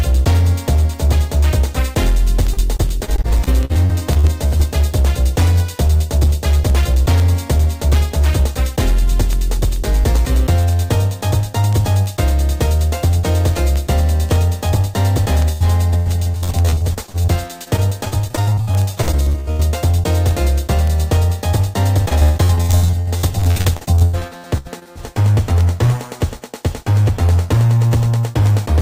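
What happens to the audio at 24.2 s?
At 24.2 s the sound is in the middle of a stretch of repeated packet loss (robotic sound) running from 22.09 to 24.97 s. Twenty-nine gaps arrive in quick succession, the longest 122 ms, and each is patched by extending the last received sound, so about 41% of the span is concealment. It comes across as choppy, with pieces missing. A spectrogram shows smeared, frozen horizontal bands between breaks, and the waveform repeats itself in short blocks.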